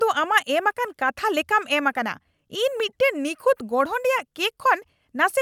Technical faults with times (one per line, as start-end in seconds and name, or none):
none